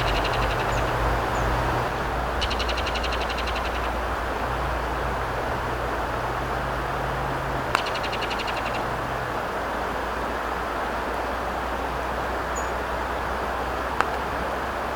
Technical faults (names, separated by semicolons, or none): doubled audio track